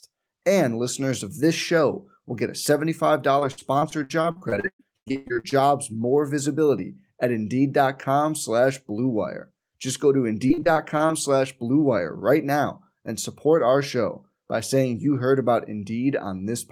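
From 3.39 to 5.54 s, just before "more visibility at", the speech breaks up with repeated packet loss (robotic sound). Audio drops out over and over. Each hole is filled by stretching the last sound, the longest for about 116 ms. Nearly two fifths of this span is patched, so it turns choppy. After "go to", 10.48 to 11.11 s brings a shorter, milder burst with briefer gaps and about a quarter concealed.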